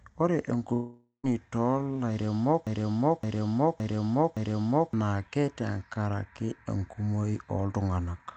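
Speech heard through a call codec whose top end stops near 8 kHz. A long network dropout runs from 0.73 to 1.25 s: the last sound smears into a fading buzz, then about 130 ms of silence, and half a second of audio is simply gone, likely from lost packets. A broken-record loop follows from 2.67 to 4.93 s, where a 566 ms fragment repeats back to back four times, likely a stalled stream resending its last buffer, and the speech that belonged there never plays.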